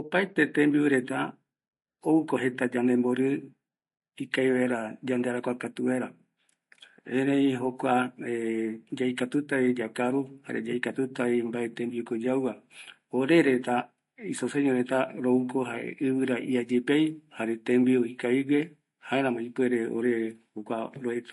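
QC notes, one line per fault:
Throughout, MP3 compression: the encoder likely ran short of bits, which fits a bitrate around 50 kbps, so it cut all treble above 11.3 kHz and dropped weak frequency lines, which then flicker in and out between frames. The speech is dull at the top, with a watery, swirling texture, metallic chirping on s sounds, and consonant attacks that smear rather than strike cleanly. The damage is plainly audible.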